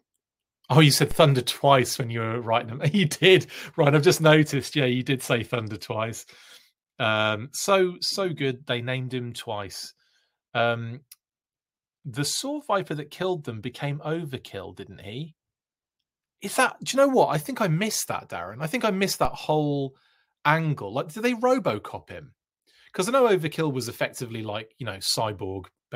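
A DC step at 1.11 s, after "you said", and again at 19.25 s, after "I think I missed": the waveform baseline jumps about −19 dBFS then drifts back, heard as a low thump, a brief vertical low-frequency smear on the spectrogram.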